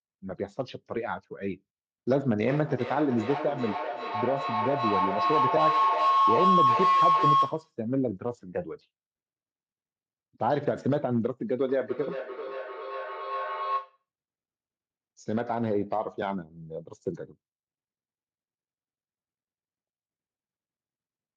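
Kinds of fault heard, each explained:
Feedback howl: a microphone-to-loudspeaker loop gaining level each pass makes this speech build into a tone near 1 kHz, pulsing about every 0.4 s, twice.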